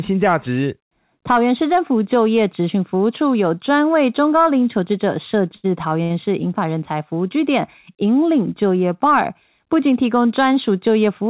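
At 5.56 s there's a short stall from a late packet. The receiver ran its jitter buffer dry and held the last bit of sound for about 76 ms until the data showed up, then carried on from the same spot. Nothing's lost, but that sound is stretched, with a faint buzzy smear. The same thing happens again at 6.03 s, this time about 71 ms. All of it sits in narrowband call audio, with nothing above 4 kHz.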